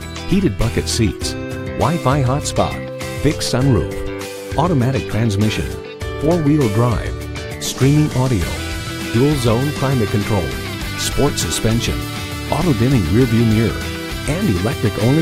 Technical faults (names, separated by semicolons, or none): none